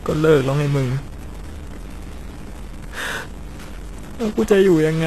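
From the start to the end of this speech clip, a distortion rides on every syllable, and the pauses between phrases fill with a steady hiss rather than falling silent. This points to a stuck bit, likely one data line held at a fixed value. It differs from clipping, which only bites on loud peaks. Here quiet passages suffer too, because small samples crossing zero keep flipping against the stuck bit.

Throughout, the treble also sounds synthetic. Nothing reaches above 12.3 kHz, and s sounds come out gritty and lispy, with a metallic sheen that doesn't sit in tune with the lower harmonics. This is most likely HE-AAC compression at a low bitrate, around 16 kbps, with the codec damage plainly audible. Unlike a simple low-pass, the upper band is still bright but rebuilt from copied lower bands, so it sounds grainy rather than dull.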